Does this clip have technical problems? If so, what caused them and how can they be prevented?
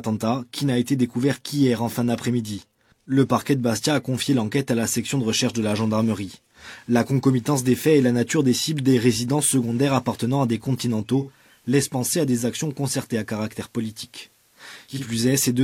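Yes. Digital radio blending to analogue, 11.18 to 15.14 s: lost digital reception triggered a 305 ms cross-fade to FM, adding faint hiss and about 2 dB less level. Prevent it by improving antenna placement so the digital signal holds throughout the recording.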